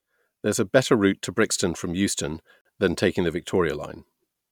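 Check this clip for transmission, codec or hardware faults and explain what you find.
A gap at a join of encoded pieces occurs from 2.61 to 2.65 s: separately encoded segments were spliced untrimmed, leaving encoder delay and padding, so a 42 ms gap with smeared edges cuts in before "than taking the".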